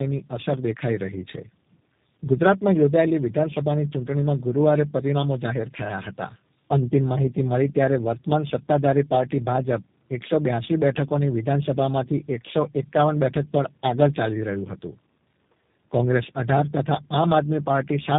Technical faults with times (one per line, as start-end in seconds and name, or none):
0.00-18.18 tandem speech coding